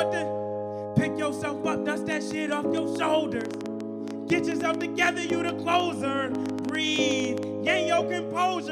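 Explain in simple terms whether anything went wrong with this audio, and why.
A train of clicks runs from 2.12 to 7.44 s: about 40 sharp ticks, roughly six per second at an uneven pace, standing out clearly above the sound, gaps included. The likely cause is electrical interference or a faulty connection or power supply injecting repeated pulses.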